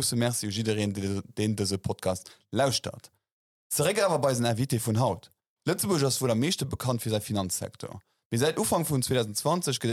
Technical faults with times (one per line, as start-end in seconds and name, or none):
none